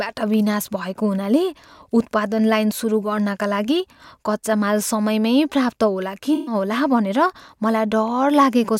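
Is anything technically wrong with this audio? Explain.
Yes. From 6.34 to 6.55 s there is AAC frame loss with concealment: the decoder rebuilt missing frames from the last good spectrum. The speech turns smeared and noisy, and a spectrogram shows blurred harmonics across the gap.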